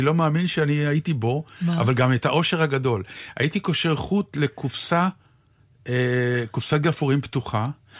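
No technical faults are audible.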